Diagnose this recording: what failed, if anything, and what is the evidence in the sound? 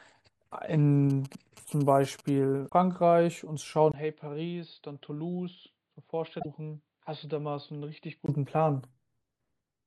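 GSM signalling bursts entered the analogue wiring, where a nearby phone's radio pulses were rectified. From 1.10 to 2.30 s a galloping 217 Hz tick-buzz sits roughly 25 dB under the speech.

Damaged data in a compressed stream upset the codec. At 2.65 to 2.72 s and 6.36 to 6.46 s the decoder lost sync, leaving brief glitches.

The input was likely switched to a poorer device. At 3.92 s, after a 20 ms gap, the speech turns dull, cut above 4.9 kHz and roughly 10 dB quieter, until 8.28 s.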